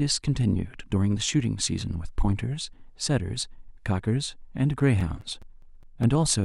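CD scratch ticks run from 4.59 to 6.04 s in this speech recording: eight short ticks, about five or six per second, none longer than around 10 ms. A disc blemish defeats error correction once per rotation, so the player patches or mutes those samples.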